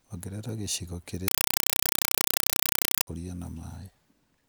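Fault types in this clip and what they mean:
Compressed stream played as audio: from 1.28 to 3.07 s the speech becomes loud chattering static, as undecoded AC-3 data, fitting a 192 kbps stream, is read as samples. The waveform shows 4 ms noise bursts 31.25 times a second, and the spectrogram shows broadband vertical stripes separated by silent gaps.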